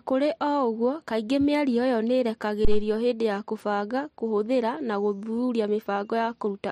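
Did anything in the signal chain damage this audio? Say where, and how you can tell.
Yes, at the analogue input stage. At 2.65 s a deep, low thud cuts into the speech and dies away within about 50 ms, with the disturbance over by 2.87 s. That is a phantom power thump: a supply on the live microphone input was switched, and the sudden DC step passed through the input's coupling capacitors as a single low-frequency pulse. Its shape, one dull hit with a rapid decay rather than a crackle or repeated clicks, points to a supply transient.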